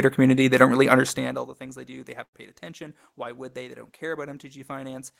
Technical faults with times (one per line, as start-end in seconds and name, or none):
2.23-2.35 burst of packet loss